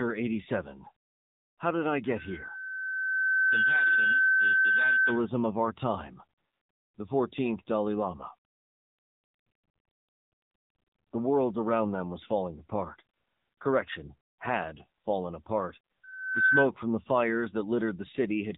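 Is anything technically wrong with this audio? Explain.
Yes. The speech has been through the AMR narrowband mobile codec for the whole clip. At a bitrate around 7.95 kbps, each 20 ms frame is rebuilt from a vocal-tract model excited by a few pulses. Nothing above 3.8 kHz survives, and the voice sounds plainly buzzy and synthetic.

A loudspeaker feedback squeal runs from 16.03 to 16.70 s. A microphone picked up the loudspeaker it was feeding, and the loop gain went past one at 1.5 kHz. That tone swells over a little under half a second until it sits roughly 10 dB above the speech.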